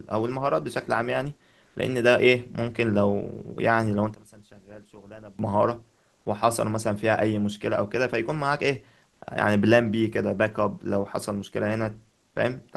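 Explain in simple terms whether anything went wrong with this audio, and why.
Two things went wrong in this speech recording. First, there is comfort noise in place of the background. At 1.67, 9.11 and 12.27 seconds, the real background vanishes for about 80 milliseconds. A flat, smooth hiss fills the gap. It is slightly louder the first time and quieter the other two. The call software likely stopped sending sound during pauses.

Second, there is one channel inverted. From 4.15 to 5.39 seconds, the two stereo sides work against each other. Played through a single speaker, they largely cancel. The speech drops sharply in level. One side's signal was likely flipped upside down.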